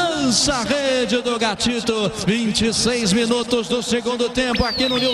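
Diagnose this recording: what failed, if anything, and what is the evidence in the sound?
Nothing failed: no stage of the chain leaves audible evidence of a fault anywhere in the recording.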